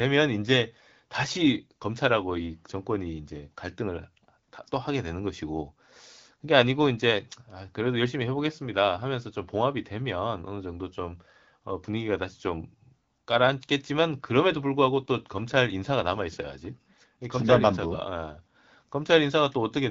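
Nothing technically wrong can be heard in this speech recording. It has gone through the AMR wideband (HD Voice) codec at 12.65 kbit/s, which keeps the speech clear and fills the band above 6.4 kHz with shaped noise.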